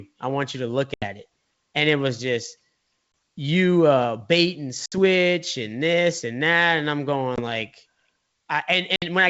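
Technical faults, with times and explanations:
0.94–1.05, 3.12–3.14, 4.86–4.99, 7.36–7.40 and 8.96–9.05 s, packet loss on an ADPCM call: gaps of 80, 20, 60, 20 and 60 ms (one to four packets) show as flat waveform and blank spectrogram columns with sharp edges. The decoder's predictor and step size lose track, so the speech after "and it was just" or "you uh bait and" resumes slightly distorted for a few tens of milliseconds.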